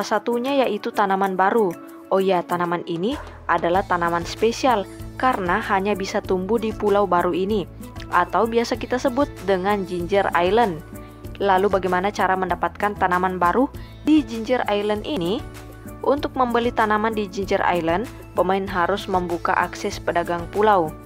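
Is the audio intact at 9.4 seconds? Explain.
Yes, at 9.4 seconds the audio plays through cleanly, with no dropout, click, distortion or other fault to be heard at that moment.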